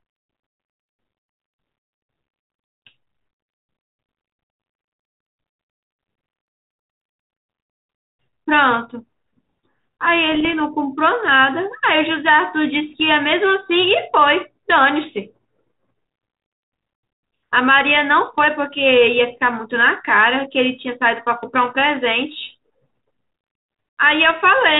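Bit errors on an ADPCM link at 10.32–10.60 s and 12.90–13.00 s: flipped bits throw the decoder's step size and predictor off, producing pops and rough, level-jumping bursts in this 32 kbit/s G.726 speech.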